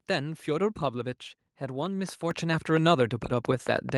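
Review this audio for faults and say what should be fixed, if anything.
A train of clicks runs from 1.86 s to the end of the clip, at a steady 4.4 clicks per second, each popping out well above the speech and carrying on through the pauses. The even spacing and near-identical shape set it apart from random crackle or packet-loss glitches, which cluster unevenly and disturb the speech itself. The likely cause is interference from nearby equipment or a faulty connection or power supply injecting a pulse on a fixed cycle. Preventing it means moving or shielding the offending device and checking the interface's cabling and power.

A microphone volume stepped up event occurs at 2.31 s, where speech and background jump together by about 6 dB in a single step. The call software judged the input too quiet and raised the device's input volume in one move. A compressor or automatic gain stage would ride the level smoothly; here the noise floor lifts with it, instantly and permanently. 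Turning off automatic microphone level adjustment and setting the input gain correctly beforehand prevents it.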